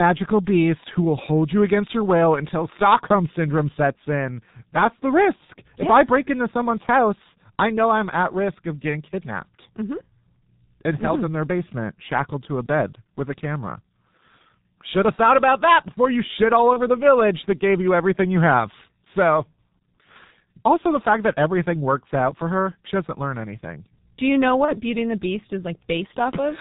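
The whole recording passes through the G.723.1 codec at heavy damage, consistent with its 6.3 kbit/s mode: nothing above 4 kHz survives, leaving muffled, hoarse speech with smeared consonants. At 16.73 to 16.80 s, after "before you shit all" and before "the village that gave", VoIP packet loss is concealed by the speech codec, consistent with one lost 30 ms frame: the decoder extrapolates from its last pitch and filter with falling gain. The same concealment recurs at 24.65 to 24.74 s, just after "you know".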